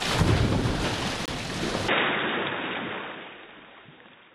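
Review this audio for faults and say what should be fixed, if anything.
A compressed frame arrived with flipped bits, the decoder rejected it, and the player substituted silence. The result is a corrupt frame muted, an abrupt 42 ms hole from 1.26 to 1.30 s, with timing preserved. Protect the stream with error correction or concealment so damaged frames are rebuilt rather than silenced.

From 1.89 s to the end, the recording likely switched to a poorer input device. The sound abruptly turns duller, with nothing above 3.8 kHz, a level shift of around 5 dB, and a new background noise floor roughly 50 dB down. There is no gap at the switch. Lock the intended input device for the session so the system cannot change microphones mid-recording.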